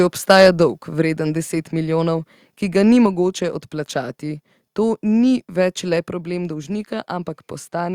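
From 0.30 to 0.48 s the loudest speech peaks break up into a harsh, crackling edge. This is microphone overload, likely from input volume pushed about 3 dB past what the converter can hold, so the tops of a small share of waveform peaks are flattened. Unlike codec distortion, it rides only on the loudest moments.

At 1.02 s and again at 3.06 s, speech and background both drop suddenly by about 4 dB. This is a microphone volume step-down, likely the call software cutting input gain after that overload. Unlike a fade or gain riding, each drop is a single instant step.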